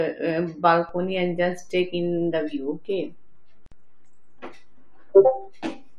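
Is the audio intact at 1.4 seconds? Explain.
No. A DC step begins at 0.89 s: the waveform's zero line jumps to a new offset, as when a converter recalibrates, and the fault runs to the end of the clip. The step itself is a low thump or click, and 1.4 s sits inside that shifted stretch while the speech continues.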